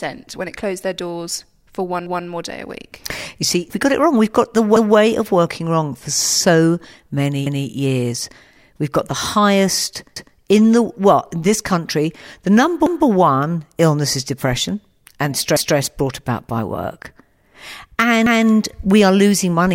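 Speech with overlapping chunks: at 2.06, 4.76, 7.46, 10.16, 12.86, 15.56 and 18.26 s, a 200 ms stretch plays twice, heard as a regular stutter, first between "their doors for one" and "more day a week". Each 2.5 s chunk restarts before the previous one ended.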